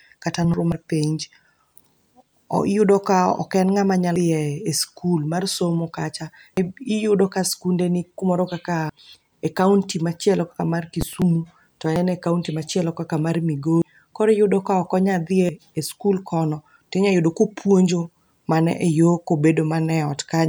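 Speech, with compressed frames skipped eight times: 0.35–0.82, 4.16–4.25, 6.57–6.67, 8.90–8.99, 10.94–11.50, 11.87–11.96, 13.82 and 15.40–15.49 s. Each time the sound jumps ahead roughly a tenth to a third of a second as whole coded frames are dropped. On a spectrogram, the formant tracks break off abruptly.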